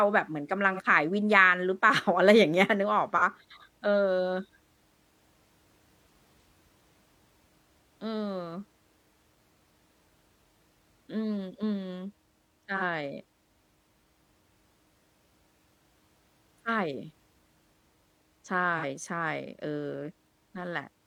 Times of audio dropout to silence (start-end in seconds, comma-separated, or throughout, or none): none